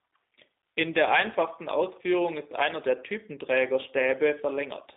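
From start to finish the speech has passed through a G.729 codec, most likely the G.729A variant, at a rate that fits an 8 kbit/s VoIP link. Rather than carrying the waveform, the codec rebuilds each short frame from a vocal tract filter, a pitch predictor and a few pulses, and cuts everything above 3.8 kHz. The result is narrowband telephone sound, roughly 250 Hz to 3.7 kHz, thin in the lows, with a plainly audible rough, synthetic edge.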